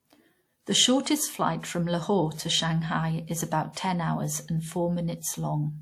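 Speech running the full length carries the artefacts of a low-bitrate codec, with nothing above about 19.7 kHz. It is likely low-bitrate audio saved at a high bitrate, consistent with a 64 kbit/s WMA encode later re-saved as 256 kbit/s MP3, which cannot restore the lost detail.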